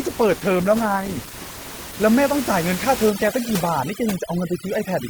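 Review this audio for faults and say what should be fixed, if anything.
For the first two seconds, 0.0 to 2.0 s, you've got an adaptive stream starting at a low bitrate. The top end is thin or synthetic and the codec artefacts are stronger, which fits something like Opus at 16 kbit/s. Then it jumps cleanly, with no gap, to a much fuller sound that points to around 64 kbit/s once the player has sized up the connection. To prevent it, let the player start on a higher rung, or buffer briefly before playback, so the opening isn't stuck on a low tier.

From 3.1 s to the end at about 5.1 s there's overdone noise removal. The room noise, which sits about 11 dB below the speech, gets pushed down and broken up, with little twinkly specks left behind. The suppressor is also shaving off the quieter parts of the speech. To prevent it, dial the noise reduction strength back so it only trims the room noise rather than gating whole frequency bands.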